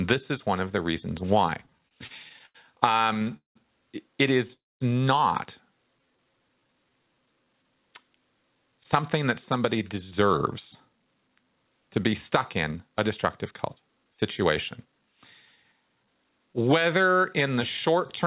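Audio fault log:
1.66–3.57 s, repeated stalls (stutter): right after "of the reasons why" the speech keeps catching, 19 little hitches in under two seconds, the longest about 0.19 s. Packets were trickling in slower than playback, so the jitter buffer kept running dry and the receiver stretched the last sound to cover each wait. Around a quarter of that stretch is filler, nothing's actually lost, it just drags and stammers.
4.53–4.82 s, call audio freeze: the speech stops dead for about 0.27 s, most of it near-silent after a brief fading tail of the last sound. It likely comes from packets getting held up on the way and emptying the buffer; once they turned up, playback resumed exactly where it left off. So a gap got pushed into the speech rather than anything dropping out, and everything after sits a bit later.
5.99–7.64 s, jitter buffer slow-down: here the talking sounds drawn out, running at about 86% speed with the pitch unchanged, adding roughly a quarter second overall. 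The receiver was rebuilding its reserve by repeating single pitch cycles and bits of pauses over and over, which is why syllables feel stretched rather than the voice being lowered.
9.19–16.39 s, jitter buffer speed-up: a long stretch ending just before "whether in the" where the speech runs about 8% fast at normal pitch, shaving off around half a second in total. The buffer was holding too much, so the receiver kept snipping out tiny pitch-period-sized slices to pull the delay back down. It comes across as slightly hurried delivery rather than chipmunked.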